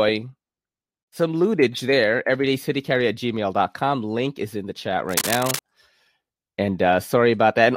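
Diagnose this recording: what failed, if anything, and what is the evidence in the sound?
Cable scratch noise, in the analogue wiring: from 5.09 to 5.59 s a dense, ragged rustle sits over the speech, nearly as loud as it. Likely a worn cable or connector being moved, its contact resistance fluttering. A spectrogram shows broadband, irregular streaks; the waveform, jagged spikes.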